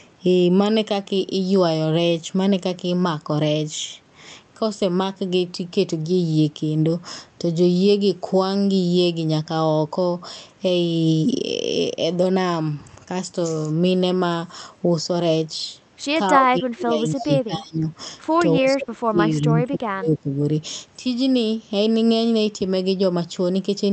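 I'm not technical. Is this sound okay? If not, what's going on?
No. From 16.3 to 17.89 s and again from 18.5 to 20.39 s, the speech dips sharply. This is likely speech suppressed in double talk: with both sides talking at once, the call's echo canceller turned the voices down, the second time more deeply.

At about 17.2 s, a brief, faint copy of the voice returns about 0.29 s late, likely an echo leak where loudspeaker sound escaped the echo canceller.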